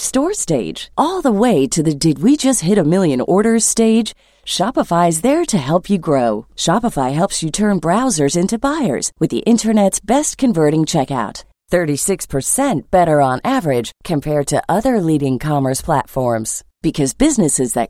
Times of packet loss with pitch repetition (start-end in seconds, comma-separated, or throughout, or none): none